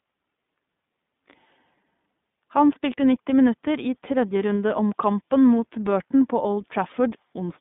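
From start to finish the speech sounds thin, boxed-in and slightly rough, with a plainly audible synthetic edge. That is the iLBC codec: the band is cut to about 150 Hz to 3.6 kHz, and each 20 ms frame is coded on its own, which fits iLBC's 15.2 kbps mode.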